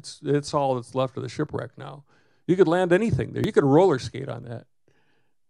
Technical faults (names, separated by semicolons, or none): audio missing between chunks